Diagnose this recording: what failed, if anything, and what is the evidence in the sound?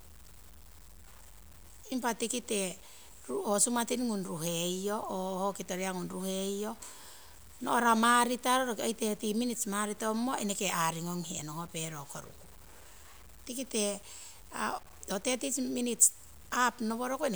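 The speech carries a gritty, grainy distortion for the whole recording that rises and falls with the voice, with error sitting roughly 25 dB below the speech. Quiet syllable tails sputter or drop out rather than fading smoothly. The likely cause is a sample-format conversion down to 8 bits by truncation, without dither: low bit depth without dither. A waveform would show visible stair-steps, and a spectrogram would show signal-following broadband hash rather than a steady noise floor.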